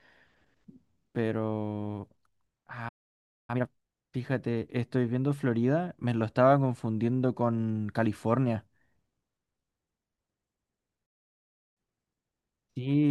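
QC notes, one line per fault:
2.88–3.50 s: playback stall. The speech cuts off mid-flow and the output falls silent for about 0.6 s, then resumes from where it stopped. The likely cause is the player running out of buffered data, or its output thread being blocked, so nothing reaches the output until it recovers.
3.50–4.08 s: time-compressed catch-up. Immediately after the gap the speech runs at twice normal speed but keeps its normal pitch. The player is working off its backlog by cutting out small pieces and cross-fading across the joins.
11.06–11.77 s: playback stall. A second dropout silences the speech for about 0.7 s before it continues from the point of interruption. This is likely another buffer underrun or a blocked playback thread that starved the output.
11.77–13.11 s: time-compressed catch-up. The remaining speech is hurried at about 1.1 times normal speed with pitch preserved. 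This gentler compression spreads the recovery over a longer stretch, so the speed-up is milder.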